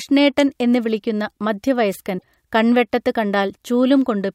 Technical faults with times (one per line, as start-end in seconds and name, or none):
2.15-2.23 damaged data in a compressed stream